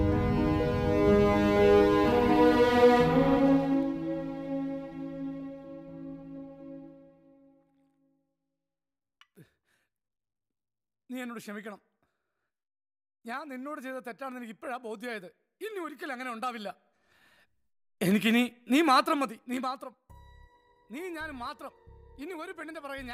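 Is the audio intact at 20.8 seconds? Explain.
Yes, the audio is intact at 20.8 seconds, with no fault present at that moment.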